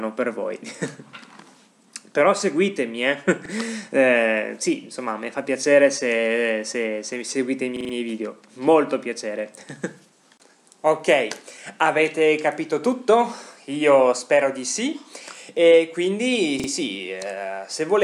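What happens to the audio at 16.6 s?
At 16.6 s the playback device hits a repeated buffer: fresh audio fails to arrive in time, so it replays the last block twice more, from 16.60 to 16.68 s. Each block lasts about 42.67 ms, which fits a 2048-sample buffer. The same short piece of sound is heard three times in a row, with a hard join at each restart, giving a brief stutter. Essentially nothing is skipped. The repeats only delay what follows.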